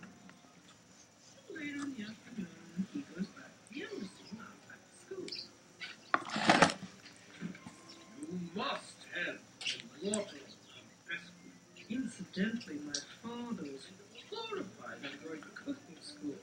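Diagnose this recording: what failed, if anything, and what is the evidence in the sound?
Nothing in the recording stood out as a failure on careful listening, so there is no stage to point to and no evidence of a fault to report.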